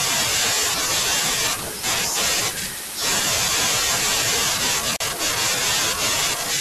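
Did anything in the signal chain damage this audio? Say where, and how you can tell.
Yes: a gap at a join of encoded pieces, a codec-stage fault, opens a 40 ms silence from 4.96 to 5.00 s. The waveform shows a flat hole with smeared edges where untrimmed encoder delay and padding survived.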